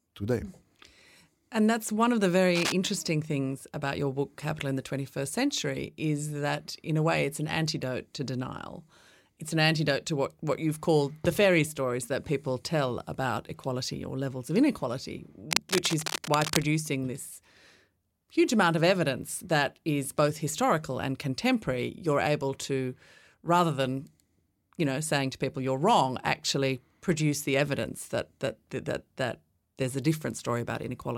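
It's a speech clip with cable scratch noise in two spots: a short burst from 2.55 to 2.72 s, between "that's one of the" and "things about your book", and a longer rustle from 15.51 to 16.63 s after "or levels of inequality". Both sit only a little below the speech, likely from a worn lead or connector being moved.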